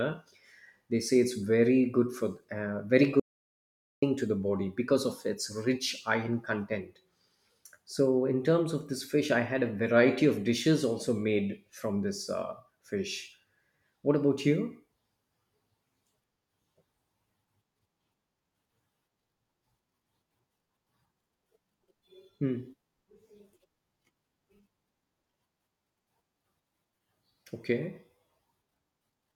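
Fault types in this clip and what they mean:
Audio dropout to silence: the speech cuts off at 3.20 s and resumes at 4.02 s, leaving about 0.83 s of silence with no room tone, unlike a natural pause. The likely cause is a lost input or mute while recording continued.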